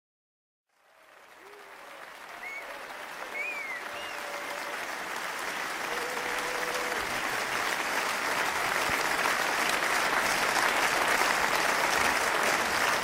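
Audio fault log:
8.90–8.93 s, loud pop: a sudden voltage step, likely from a plug, switch, static discharge or driver glitch, entered the signal path and was shaped by the circuitry after it, giving a single sharp pop about 10 dB above the surrounding sound, which carries on underneath.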